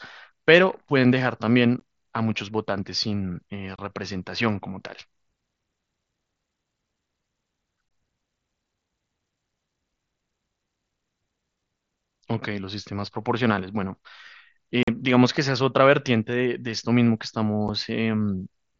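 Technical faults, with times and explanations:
1.8, 3.76–3.79, 7.89–7.91, 14.83–14.88 and 17.68 s, unconcealed Bluetooth headset packet loss: headset voice packets never arrived and nothing filled the gaps, so the mSBC-coded speech drops to silence for roughly 8 to 45 ms with hard, abrupt edges. The lengths fit runs of lost 7.5 ms packets.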